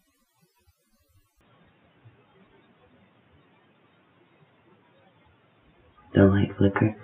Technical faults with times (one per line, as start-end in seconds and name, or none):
1.41-7.04 input switched to a poorer device